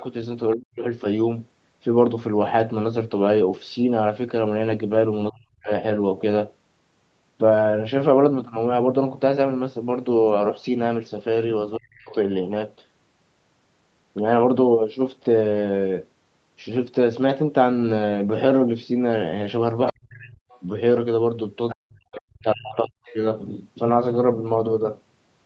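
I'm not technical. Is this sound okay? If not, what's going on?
No. There are two related problems, both typical of a phone or video call where both people talk at once.

The first is speech suppressed in double talk. The talker's voice sinks almost to silence at 0.54–0.84 s, 5.3–5.7 s, 11.77–12.15 s and 19.91–20.44 s, then for a full second at 21.74–22.98 s. Each drop is deep enough that the voice nearly vanishes. The likely cause is the call's echo canceller, which could not tell the talker apart from the other person coming out of the loudspeaker and turned everything down.

The second is the other side's voice leaking through. Brief, faint scraps of a second voice appear at 20.5–20.61 s, 21.69–21.76 s and 23.04–23.15 s, just around that longest dropout. The loudspeaker's sound likely reached the microphone and wasn't fully removed, so short fragments of the far end slipped into the recording.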